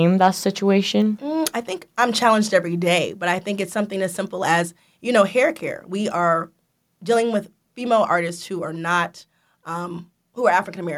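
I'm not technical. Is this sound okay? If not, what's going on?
No, there's one small problem. At about 0.24 to 0.26 s, the speech has a brief harsh crackle on a loud moment. That's microphone overload: the input level was likely set too high, so the tops of the loudest peaks were cut off.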